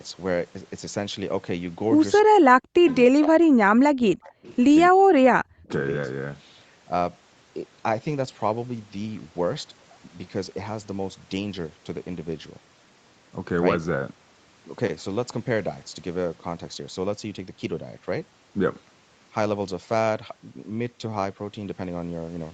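A speech recording carrying two call faults early on. The speech is suppressed in double talk, likely because the echo canceller could not tell the local talker from loudspeaker echo while both sides spoke and turned everything down. The voice dips by up to about 40 dB or cuts out in pieces from 2.19 to 2.86 s, 3.07 to 4.41 s and 4.91 to 5.7 s. There is also an echo leak, likely from a loudspeaker-side echo canceller letting part of its microphone pickup through and sending it back. It is heard as faint scraps of the voice returning 273 ms late, about 25 dB below the speech at 2.87 to 2.96 s and about 30 dB below at 4.43 to 4.56 s.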